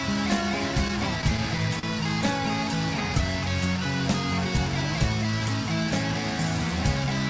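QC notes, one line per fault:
0.88–1.85 s, repeated stalls (stutter): five short hitches totalling 85 ms, the longest 39 ms. Late packets kept draining the jitter buffer, so the receiver stretched the preceding sound across each wait. Nothing is lost, but the passage drags and stumbles.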